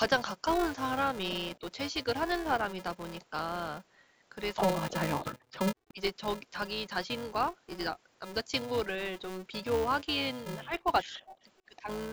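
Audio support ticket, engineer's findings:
Filter restarted on every block: processing filter state resets per block, each block starting from silence. Regular ticking buzz near 375 Hz throughout, tracking level, which fits a 128-sample block at 48 kHz.

Speech suppressed in double talk: likely echo canceller unable to separate near talker from loudspeaker echo, ducking both. Dips at 1.59–1.64 s, 4.78–5.36 s, 5.79–6.00 s, 10.65–10.87 s, 11.27–11.37 s. Light (about 10 dB) to deep (roughly 40 dB) drops.

Echo leak: likely residual loudspeaker pickup passing through an echo canceller. Faint delayed copy of the speech, 167 ms late and about 30 dB down, in short scraps at 5.52–5.58 s and 5.89–5.93 s.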